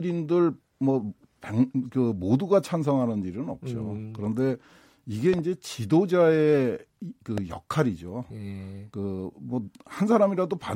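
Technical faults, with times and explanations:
5.34 to 5.41 s and 7.38 to 7.40 s, loud pop: the first is a double pop, two sharp clicks in quick succession; the second is a single pop. Each stands roughly 10 dB above the speech, which carries on underneath. Each sounds like a sudden voltage step or pulse entering the signal path, most likely from a plug, switch, static discharge or driver glitch, which the following circuitry rounds into a brief thump.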